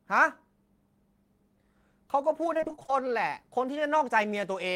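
A speech clip with repeated packet loss (robotic sound) from 2.53 to 2.90 s. Audio arrived late or went missing in short bursts, the longest 26 ms. Each hole was patched by stretching the preceding sound, covering nearly half the stretch and leaving it choppy.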